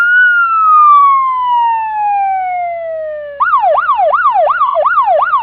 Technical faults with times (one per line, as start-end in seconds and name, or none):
0.99-1.01 AAC frame loss with concealment
4.66-4.76 AAC frame loss with concealment